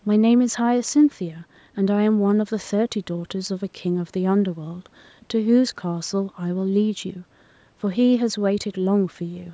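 Nothing stood out on listening; the speech carries the trimmed low bass and the absence of content above 8 kHz expected from a call microphone path, and neither is a fault.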